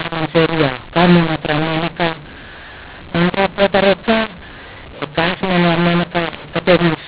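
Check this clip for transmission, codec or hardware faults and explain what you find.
There is one fault, and it runs through the whole clip. The mu-law and A-law mixup is present from start to finish: the speech was coded with G.711 A-law but decoded as mu-law. Each 8-bit code is mapped onto the wrong logarithmic curve, so some levels come out too loud and others too quiet. The quietest samples are pushed well above silence. The result is harsh, gritty, distorted speech, with noise filling the pauses. The underlying telephone band, capped at 4 kHz, comes through as expected for 8,000-sample A-law coding.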